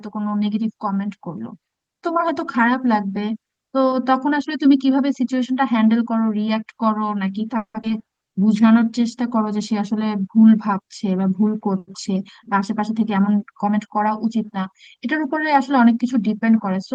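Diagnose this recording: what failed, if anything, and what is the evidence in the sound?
At 7.57 to 7.76 s the sound stops and is replaced by a short buzzy continuation of the last sound that fades out, with the final 90 ms or so silent; 170 ms has been filled in and nothing is lost. This is a call audio freeze, most likely a network stall that drained the jitter buffer so the receiver extended its last frame. On a spectrogram the last frame's spectrum is smeared and decays to a blank band; the waveform tapers to flat.

Almost immediately after, at 7.82 to 7.85 s, playback jumps forward: a skip ahead where about a tenth of a second of speech is gone and the two sides are joined with only about 10 ms of bridging. This happened at the jitter buffer or network stage, as the late packets arrived together and the backlog was cut to recover the delay. The waveform shows an abrupt splice, and the spectrogram shows formant tracks that break off and restart at a different point.

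From 7.98 to 8.99 s the speech runs at about 90% speed with its pitch unchanged, drawn out by about 110 ms in total. This is a jitter buffer slow-down, where the receiver repeats single pitch periods to rebuild its reserve after the disruption. On a spectrogram, harmonics keep their spacing while syllables stretch horizontally. In the waveform, runs of near-identical periodic cycles are visible.

Between 13.33 and 13.88 s the reverse occurs: the speech is hurried to about 112% speed at the same pitch, with roughly 70 ms removed. This is a jitter buffer speed-up, where the receiver trims pitch periods to shed excess buffered delay. Spectrogram harmonics stay at the same frequencies but syllables are compressed in time. The waveform shows periodic segments shortened by missing cycles. Throughout, the Opus call path's top cut-off near 12 kHz shows as a clean ceiling, which fits a 24 kbps setting.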